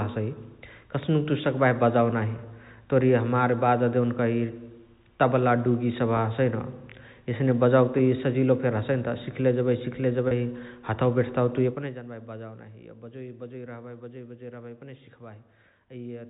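Three brief held, buzzy blips interrupt the speech: at 6.17 s, at 7.98 s just after "एस्ने बजावके", and from 10.28 to 10.31 s just before "हथवा बेठताउ". This is packet loss with pitch repetition. Audio went missing, 10 ms at each of the first two points and 30 ms at the third (which fits about three 10 ms packets), and the receiver bridged each gap by repeating the last pitch period.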